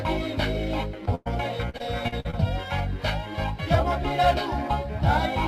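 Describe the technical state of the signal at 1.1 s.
A short concealed packet loss runs from 1.05 to 1.09 s. About 20 ms never arrived, and the receiver extended the preceding sound, leaving a brief smear. A burst of packet loss follows from 1.15 to 1.28 s. Roughly 100 ms is missing. The last sound is held and faded without silence, then playback jumps ahead.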